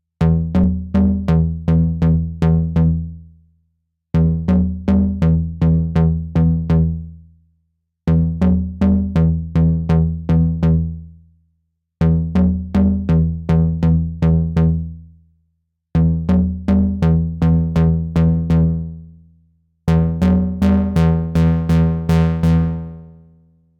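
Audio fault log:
No audible faults anywhere in these sounds.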